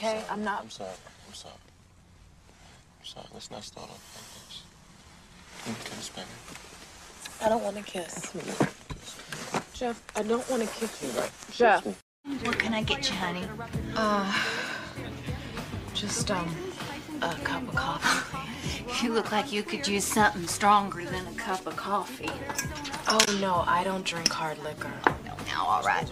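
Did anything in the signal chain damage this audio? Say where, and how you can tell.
Yes. Damaged data in a compressed stream shows up from 23.24 to 23.28 s, a brief glitch lasting about 40 ms. The damage sits at the codec stage, in the encoded bitstream itself. Some bytes in the file or stream were lost, overwritten or corrupted, so the decoder could not read those frames correctly. It lost sync, produced garbage for that instant, then locked onto the next valid frame header and resumed normal decoding.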